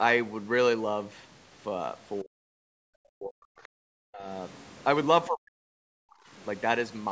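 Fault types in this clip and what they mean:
Speech suppressed in double talk, 2.23–2.93, 3.12–3.4, 4.02–4.28 and 5.28–6.15 s: the talker's speech sinks by roughly 40 dB in four stretches, likely because the echo canceller could not tell it apart from loudspeaker echo while both sides spoke and turned everything down.
Other side's voice leaking through, 3.63–3.68, 4.58–4.84 and 6.37–6.44 s: faint scraps of a second voice, around 30 dB below the talker, slip into the microphone feed, likely echo from the loudspeaker that the canceller failed to remove completely.
Background gated by the echo canceller, 3.68–3.74 s: the room sound drops by about 38 dB for roughly 70 ms, right after a scrap of leaked voice, as the canceller clamps the microphone hard while the loudspeaker plays, then releases it.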